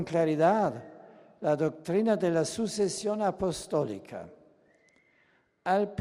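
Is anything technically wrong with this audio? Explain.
Yes. There is DAB burbling, once from 2.95 to 3.02 s and again as a brief blip at 4.68 s. Weak reception lets a small fraction of a percent of bits slip past error correction into the MP2 audio data. Corrupted samples put short blips of noise in individual sub-bands, and corrupted scale factors make sub-bands jump in level for up to a frame. The first burst sounds like it spans several frames, and the second is denser but shorter. Both come across as short blips of noise over the sound.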